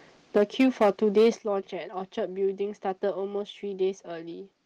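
From 0.36 to 0.9 s the speech carries a harsh, crackling edge on its loudest syllables. This is microphone overload: peaks drive about 6 dB past the converter's limit and their tops are flattened, likely from input volume set too high. At 0.38 s the level drops by about 3 dB in one step. At 1.17 to 1.29 s the speech overloads again, by about 4 dB, with roughly a fifth of samples clipped. At 1.38 s there is a second, larger drop of about 9 dB in voice and background together. Both drops are a microphone volume step down, likely the call software cutting the device's input gain after detecting clipping.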